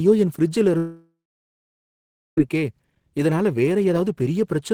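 After "என் ஃபிரிட்ஜ்ல" at 0.77 s, the speech turns into a fading buzz, then about 1.2 s of silence until "இருக்கே இதனால" at 2.38 s. This is likely a long network dropout: about 1.6 s of audio never arrived and is lost.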